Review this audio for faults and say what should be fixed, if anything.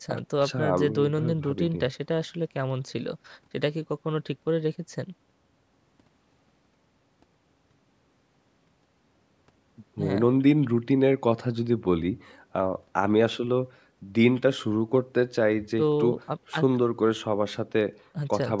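Nothing here needs fixing: the speech has just been through a call's microphone processing, which trims away the deepest bass and leaves nothing above 8 kHz, and that's simply how a call path sounds.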